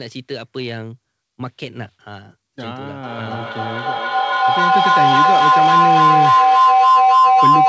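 From 3.03 s to the end, a feedback howl: the loudspeaker-microphone loop gains each pass, swelling into a tone near 1 kHz, with a loop delay of about 300 ms, that peaks about 11 dB above the speech.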